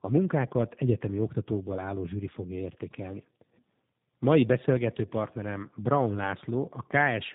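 Throughout, the speech shows tandem speech coding: two low-rate speech codecs in a row, consistent with AMR-NB re-encoded by G.729A across a G.711 link, so each coder works on the previous one's artefacts. It sounds rough, muffled and warbly, with nothing above 3.8 kHz.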